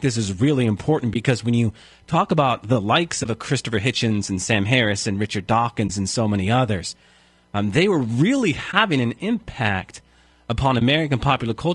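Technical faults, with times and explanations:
throughout: low-delay AAC compression. The speech sounds rough and grainy, with noise between harmonics, likely from AAC-ELD's short frames at around 32 kbps.
1.13–1.16 s, 3.23–3.26 s, 5.87–5.90 s, 8.71–8.74 s, 10.79–10.82 s: AAC frame loss with muting. Each is a brief, soft-edged dropout, consistent with one zeroed frame faded by overlapping windows.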